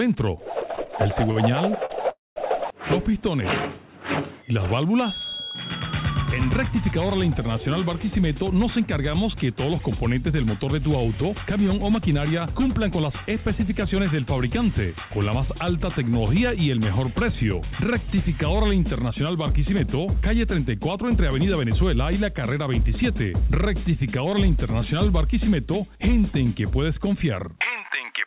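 From 0.76 to 1.92 s there are repeated stalls, a stutter. Packets arrived late, so the jitter buffer ran dry five times. Each gap was filled by stretching the last sound, 136 ms in all, the longest 46 ms. Nothing is lost, but the audio drags and hiccups.

At 2.1 s comes a call audio freeze lasting until 2.38 s. The last sound continues briefly as a fading buzz, then 180 ms of silence. The likely cause is packets held up in transit, emptying the buffer. The audio then resumes where it stopped, 265 ms later.

Jitter buffer speed-up follows twice. From 8.43 to 13.82 s the audio runs at 103 %. From 16.99 to 23.29 s it runs at 102 %. The buffer had built up excess delay and trimmed it by cutting tiny pitch-period slices, about a fifth of a second the first time, somewhat less the second. Pitch holds steady. The pace is only slightly faster than normal.

Throughout, nothing is heard above 4 kHz, which fits a narrowband telephone codec.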